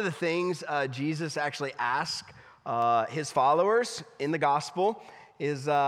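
From 0.62 s to 5.75 s, about seven short ticks recur at a steady interval of roughly 0.7 s. These are word clock ticks. The receiving device is running on its own clock rather than locking to the sender's digital stream, and the two clocks differ by something like 30 ppm. Each time they slip past one another, a single sample is dropped or repeated, which produces a brief click in the audio.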